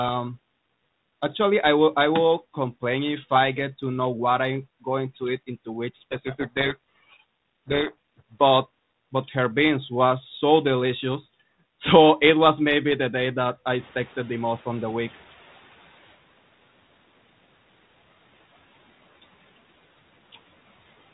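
From 5.96 to 8.20 s, between "eat into which" and "but but her beans", a codec payload misread buries the speech in harsh, grinding distortion. The G.726 code words are being unpacked in the wrong bit order. Unlike ordinary low-rate G.726 hiss, it starts and stops abruptly and swamps the speech.

After "the day that I", at 13.78 s, the room noise jumps by about 12 dB and the noise suppressor is caught up short. The noise first comes through with less reduction, then sinks by about 10 dB over 2.4 s, ending near 16.18 s. That gradual fade tells it apart from the room itself getting quieter.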